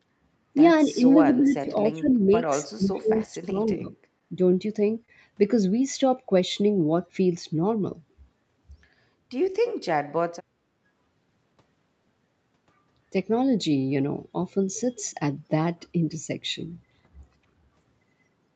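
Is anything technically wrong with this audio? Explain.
Yes, there are two kinds of fault. Speech suppressed in double talk, likely from an echo canceller, appears at 0.85–1.03 s, 1.22–2.31 s, 2.63–3.59 s and 3.75–3.92 s. The speech dips by roughly 5 to 25 dB and is deepest in the third stretch, as the canceller mistakes it for loudspeaker echo. The level rises and falls in pieces.

A short stall from a late packet occurs at 4.19–4.24 s and again at 5.06–5.11 s. The jitter buffer ran dry, and the last sound was stretched by about 15 ms and then 26 ms before playback resumed from the same point. Nothing is lost. A sound is just briefly held, which distinguishes these stalls from a packet-loss gap.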